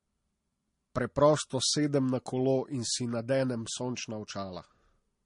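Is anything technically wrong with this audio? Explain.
Yes, there's a problem running the whole way through this speech clip. Nothing comes through above about 10.6 kHz, and the artefacts don't sound like they come from a single codec. It's likely transcoding between lossy codecs: the character fits a Vorbis encode around 66 kbit/s re-encoded as MP3 around 39 kbit/s. The MP3 stage wastes its small bit budget on the earlier damage and adds its own, so you hear both sets of artefacts stacked together on top of that dull top end.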